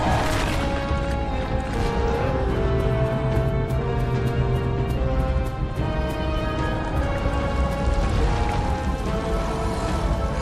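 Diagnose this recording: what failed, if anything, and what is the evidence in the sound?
Nothing failed; no fault is audible anywhere.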